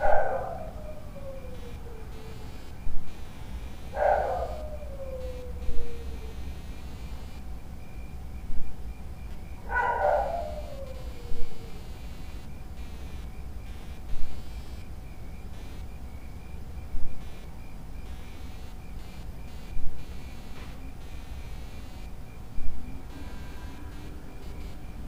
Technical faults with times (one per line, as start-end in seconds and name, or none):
0.00-25.08 computer activity noise